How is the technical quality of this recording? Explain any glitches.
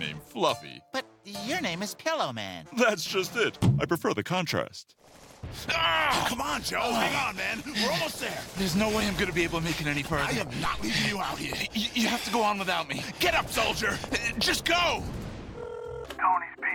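No glitches to explain: the recording holds steady throughout, with nothing breaking the signal at any point.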